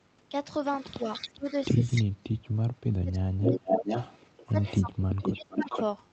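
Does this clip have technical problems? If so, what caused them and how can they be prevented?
Yes. The audio is speech, and two kinds of fault recur.

Echo leak: a delayed copy of the speech sits under the main signal from 0.76 to 1.52 s and briefly at 1.95 to 2.03 s, trailing by about 303 ms at roughly 15 dB and 10 dB below the speech. From 3.42 to 5.83 s it returns at a 463 ms lag and only about 5 dB down, nearly as loud as the original. The likely cause is a far-end loudspeaker whose echo canceller failed to subtract what its microphone picked up. Unlike room reverberation, which decays smoothly, this is a distinct repeat at a fixed lag. Prevention: use a headset at the far end, or give the echo canceller time to converge and keep the loudspeaker volume moderate.

Speech suppressed in double talk: the speech level collapses in pieces from 1.38 to 2.19 s (deepest about 30 dB, roughly 0.3 s affected), 3.01 to 3.88 s (about 30 dB, around 0.7 s), 4.47 to 4.96 s (about 15 dB) and 5.34 to 5.74 s (about 25 dB). 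These dips likely come from an echo suppressor that attenuated the talker while it was also fighting the echo. Packet-loss dropouts would produce glitchy concealment, but here the gain simply ducks while both sides are talking. Prevention: use a double-talk-robust echo canceller with gentler residual suppression, or remove the echo acoustically so that the suppressor has less to do.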